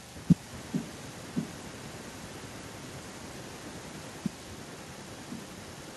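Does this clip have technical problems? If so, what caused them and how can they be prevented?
Yes. From 0.5 s to the end at 5.97 s, a faint delayed copy of the speech trails behind it, arriving about 1.06 s late and sitting roughly 20 dB below the direct voice. This echo leak is likely caused by a far-end participant using a loudspeaker whose echo canceller failed to fully remove the returning audio picked up by their microphone, sending it back into the call. To prevent it, that participant should use a headset or enable effective acoustic echo cancellation.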